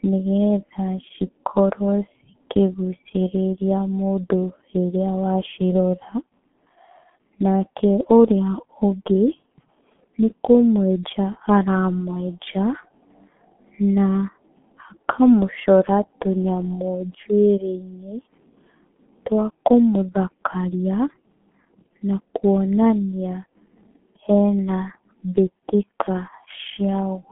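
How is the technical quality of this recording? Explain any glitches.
Quality is poor throughout, limited by a very low-bitrate telephony codec rather than by any isolated glitch.

For the whole clip, the speech sounds muffled, boxy and hoarse, with consonants smeared together and no brightness at all. This is heavy G.723.1 codec damage. The sound sits in a narrow telephone band of roughly 150 Hz to 3.4 kHz, with nothing above 3.6 kHz, and the coarse texture fits a bitrate near 6 kbit/s. The codec works in long frames and refreshes its model of the voice only slowly, so fast consonant changes blur and the voice gains a rough, buzzy edge.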